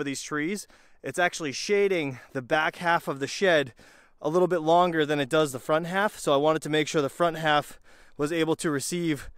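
No technical faults can be heard anywhere in the audio.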